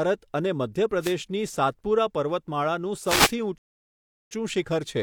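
At 1.00 s, lasting until about 1.15 s, the speech is hit by a brief swish of static, and a second, longer one follows from 3.04 to 3.33 s. These are wireless microphone noise hits: the FM radio link fades as reflected signals cancel, so the receiver's own hiss rises over the speech. Unlike a plain digital dropout, the audio is covered by noise rather than cut to silence.

From 3.58 to 4.31 s the speech stops dead and then carries on from exactly the point where it broke off. This is a rebuffering stall: playback ran out of downloaded audio and waited for more, adding about 0.73 s of silence to the clip. What separates it from packet loss or a dropout is that nothing goes missing. The silence is inserted, and the speech resumes seamlessly instead of skipping ahead.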